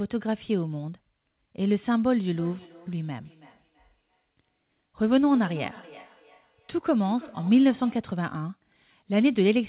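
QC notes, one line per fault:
2.32–8.13 s, feedback echo between two devices: a second device replays this microphone's sound back into it, giving thin, ringing repeats roughly every 300 ms, about 22 dB down.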